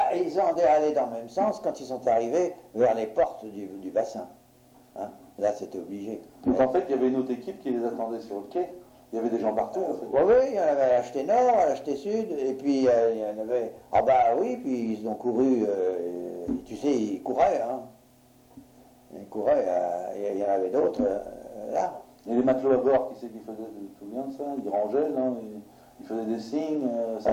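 No technical faults can be heard anywhere in the clip. There is no moment in the audio that calls for comment on technical grounds.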